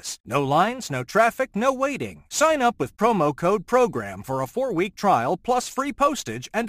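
From start to finish the speech carries a gritty, inharmonic fizz that rides on louder and brighter syllables, the mark of crude rate conversion. Samples were dropped or repeated to the nearest position rather than filtered, in a pattern that fits a 48 kHz to 44.1 kHz change. The resulting error sits roughly 25 dB below the speech. On a spectrogram it shows as faint partials that run against the voice's harmonics; the waveform shows tiny periodic steps.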